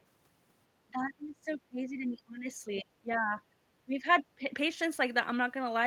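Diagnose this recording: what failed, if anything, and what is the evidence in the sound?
Speech suppressed in double talk at 0.89–2.49 s, 2.74–3.39 s and 3.85–4.5 s, where the speech sinks by as much as roughly 30 dB in chunks. This is a call-processing fault: the echo canceller likely could not separate the near talker from the loudspeaker echo during simultaneous talk and turned the near talker down.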